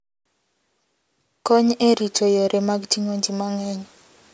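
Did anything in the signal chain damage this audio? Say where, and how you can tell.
No, nothing along the signal chain has left an audible mark on this speech; the level, timing and frequency content hold steady throughout with no disturbance at any stage.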